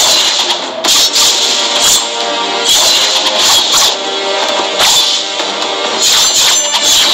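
Hard clipping runs through the whole audio: the signal is driven about 10 dB beyond what one stage can pass, so roughly 7 percent of samples have their peaks sheared flat. Those squared-off tops add high harmonics, heard as a harsh fuzz on every loud passage. Chunks out of order occur at 3.54 s, where a 5.33 ms block plays two chunks late, after audio that should follow it. Nothing is lost, but the reshuffled order leaves three hard joins, heard as a brief jumbled moment.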